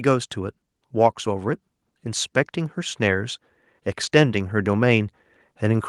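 From 0.92 s to the end of the recording, the automatic gain control judges the incoming level too low and keeps pushing its gain upward, a case of automatic gain rising. Because the boost acts on everything the microphone picks up, the speech and the background noise beneath it swell together rather than the voice alone getting clearer. The level climbs gradually over the remaining seconds instead of jumping, so the room seems to creep closer.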